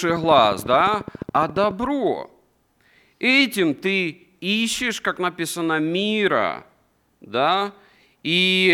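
A speech recording opens with a regular ticking, a train of clicks from 0.10 to 1.72 s at about 14.3 per second, around twenty near-identical pops peaking roughly 5 dB above the speech, most likely interference from nearby equipment or a faulty connection or power supply.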